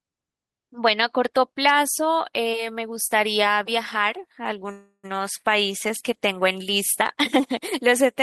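At 4.71 s the speech stops advancing and its last sound is drawn out as a buzz or hiss that fades, dropping briefly to silence for about 60 ms before the talker resumes at 5.05 s from exactly where they left off. This is a call audio freeze, likely caused by packets stalling in transit and the jitter buffer running dry. Nothing is lost. Instead, about 320 ms of filler is inserted, and everything after it arrives that much later.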